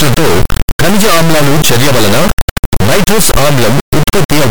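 From start to end the speech is replaced by an extremely loud, buzzing square-like signal that falls silent in the quietest passages, the signature of integer read as float. The sound points to 32-bit integer samples decoded as 32-bit floats, yielding values near zero or far past full scale.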